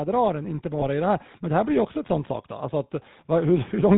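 Throughout, the speech carries the buzzy, gravelly texture of the GSM full-rate codec, consistent with its 13 kbps mode. The codec rebuilds the voice from a vocal-tract filter driven by a sparse, regularly spaced pulse excitation, so the fine detail of the original is lost and a coarse rasp takes its place. On a spectrogram, energy stops sharply at 4 kHz, and the harmonics look smeared and grainy rather than cleanly striped.

From 0.05 to 2.44 s, the automatic gain is rising. The gain control judged the input too quiet and pushed the level up by about 4 dB over a little more than two seconds. Voice and background noise swell together, with no sudden step, so the sound seems to drift closer. A waveform view shows the envelope widening steadily across that span, and the spectrogram brightens evenly at all frequencies.

Between 0.80 and 0.83 s there is a brief hiccup from lost GSM frames. 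The gap, about 20 ms, suggests a single dropped frame. The decoder filled it by reusing the parameters of the last good frame, so the sound freezes into a short metallic ring instead of continuing naturally. The spectrogram shows a narrow band where the spectral pattern repeats unchanged.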